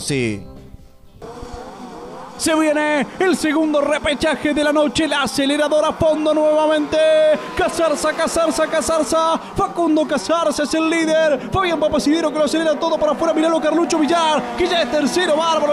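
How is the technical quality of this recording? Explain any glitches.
The signal holds steady throughout, with no audible glitches, dropouts or other technical faults to explain.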